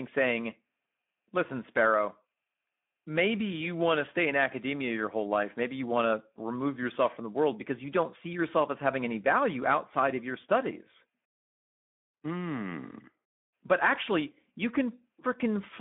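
Throughout, the speech sounds hoarse and noisy, squeezed into a 200 Hz to 3.5 kHz band with nothing above 3.7 kHz. This is Speex codec damage: at what sounds like about 11 kbps, too few bits describe the excitation.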